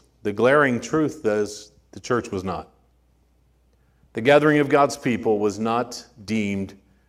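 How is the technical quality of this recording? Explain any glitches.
No glitches or technical faults can be heard anywhere.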